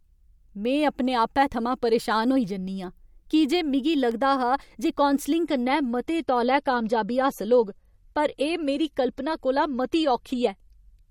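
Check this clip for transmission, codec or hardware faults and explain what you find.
Two faults are audible in this speech clip.

At 4.11 s, just after "की जे मिगी", a sharp snap appears. This is an electrical switching spike, likely a nearby switch arcing into the audio line.

From 5.44 s to the end, the quality drops abruptly without a gap. This is an adaptive stream at a lower bitrate. Treble vanishes above 14 kHz and artefacts rise, consistent with MP3 falling from around 128 to 40 kbit/s.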